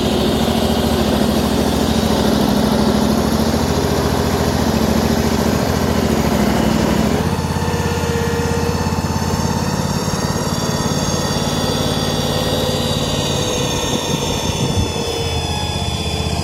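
A loudspeaker-to-microphone loop likely sitting at the edge of feedback produces a feedback whistle: a thin 3.4 kHz tone that slowly swells and fades, well below the sound, from 10.39 s to the end.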